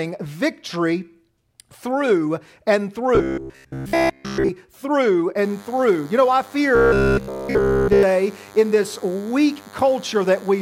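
Robotic sound from repeated short buffers runs from 3.15 to 4.5 s: a rigid metallic buzz at 66.7 Hz, likely from late audio being filled by repeating roughly 15 ms chunks, replacing most of the sound.

DECT cordless phone buzz starts at 5.44 s and continues to the end: a thin, harmonic-rich 100 Hz buzz from rectified radio bursts, about 25 dB below the signal.

Robotic sound from repeated short buffers returns from 6.76 to 8.03 s, again buzzing at 66.7 Hz, with all of the sound replaced by repeats, likely of a roughly 15 ms buffer.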